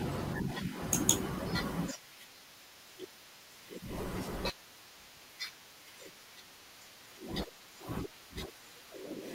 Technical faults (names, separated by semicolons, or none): compressed frames skipped